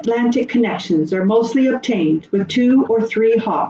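At 0.02 to 0.08 s there is a brief echo leak: a faint, delayed copy of speech, well below the main talker, roughly 20 dB down, trailing the original by about 0.38 s. The likely cause is a far end playing the call over a loudspeaker, where the echo canceller failed to remove everything its microphone picked up, so a short scrap of that residue was sent back into the call.

From 0.21 s to the end of the clip, the speech is suppressed in double talk. The talker's level sags and breaks up in pieces, at its deepest falling by something like 40 dB, so parts of the speech nearly vanish. This likely happened because both sides were talking at once and the echo canceller, unable to tell the near talker from loudspeaker echo, attenuated everything. The loss sits on top of the call path's 8 kHz bandwidth limit.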